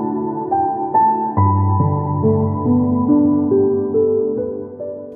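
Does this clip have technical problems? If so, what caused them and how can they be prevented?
No, the signal carries no technical faults that need a cause or a preventive step.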